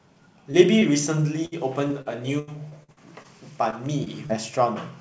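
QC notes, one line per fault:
0.52–0.55 s, 0.79–0.83 s, 3.70–3.74 s, 4.04–4.08 s, 4.26–4.31 s, short concealed packet loss: a few tens of milliseconds of audio arrived too late, and the receiver extended the preceding sound to cover each gap, leaving brief smears or wobbles.
1.45–3.26 s, repeated packet loss (robotic sound): eight gaps in quick succession, the longest 82 ms, were each patched by continuing the prior sound, so about a fifth of this stretch is synthetic, giving choppy speech with pieces missing.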